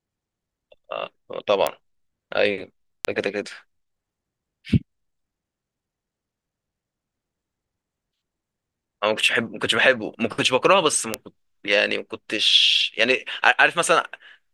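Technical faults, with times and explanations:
1.67 s, 3.05 s, 11.14 s: bit error spike. A flipped bit throws one to three samples to about −2 dBFS, giving a sharp broadband tick unrelated to the speech.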